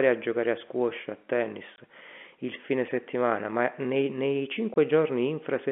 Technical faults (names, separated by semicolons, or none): packet loss filled with silence